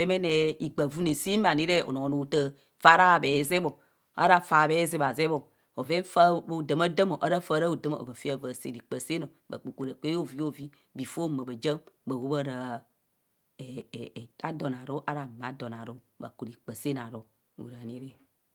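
From 0.3 s to 17.8 s, a click cuts into the speech about every 0.8 s. There are roughly twenty of them, evenly spaced. The steady rhythm points to clock drift buffer slips. The likely cause is two devices running on separate clocks that disagree by roughly 500 parts per million. The buffer between them drifts until a short block is dropped or repeated. Each block is small, on the order of 15 samples, so every slip is heard as a brief tick.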